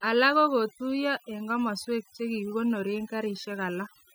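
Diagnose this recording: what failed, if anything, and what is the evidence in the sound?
The failure is overdone noise removal at the processing stage, present across the whole clip. Between phrases the background collapses to near silence dotted with twinkling specks. A suppressor set too aggressively is shutting individual frequency bands down whenever they sit near its noise estimate, taking quiet speech detail with them. A noise gate would instead cut the entire signal at once, leaving no isolated twinkling bands behind.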